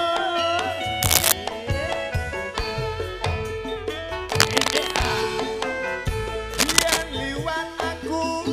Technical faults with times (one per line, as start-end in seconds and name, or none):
1.02-1.32 cable scratch noise
4.15-5.07 cable scratch noise
6.54-7.03 cable scratch noise